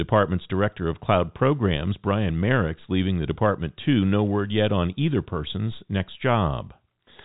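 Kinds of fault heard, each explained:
No faults are audible in this speech recording.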